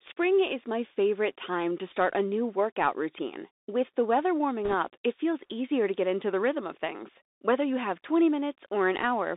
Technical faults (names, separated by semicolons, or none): Bluetooth CVSD headset codec; bit errors on a Bluetooth voice link